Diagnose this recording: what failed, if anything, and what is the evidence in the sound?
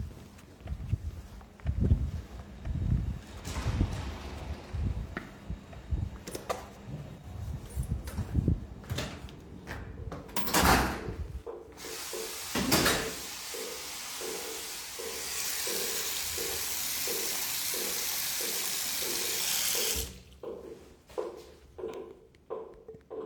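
Nothing failed: no stage between capture and playback leaves anything in these everyday sounds that points to a fault.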